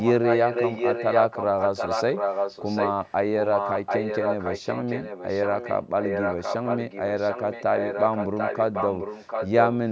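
A delayed second copy of the speech trails the talker by about 0.74 s from 0.00 to 3.13 s, 3.42 to 5.76 s, 6.01 to 9.49 s and 9.65 s to the end. It is roughly as loud as the speech in the first stretch and a little quieter after that. This is likely an echo leak: the far side's loudspeaker fed its microphone, and its echo canceller let that copy return.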